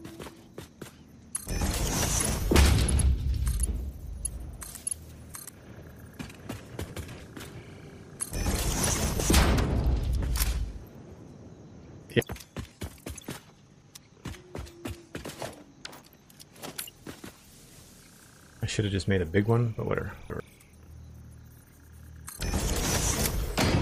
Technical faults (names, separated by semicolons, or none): chunks out of order; skip ahead; jitter buffer speed-up